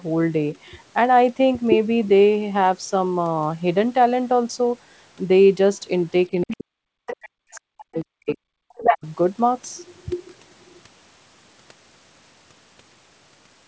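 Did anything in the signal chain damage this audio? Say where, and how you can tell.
Yes. Speech suppressed in double talk, 6.31 to 9.05 s: about two seconds of speech drop by up to about 40 dB. The waveform shows deep holes, likely from the call's echo canceller muting both sides.

The other side's voice is leaking through at 6.41, 7.07, 7.54, 7.95, 8.29 and 8.78 s. These are brief foreign bursts, from about 25 dB below the speech up to speech level, showing as stray spectrogram streaks. They are likely loudspeaker echo the canceller left behind.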